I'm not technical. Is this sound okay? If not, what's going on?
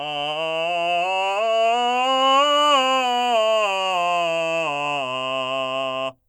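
Yes, nothing wrong here.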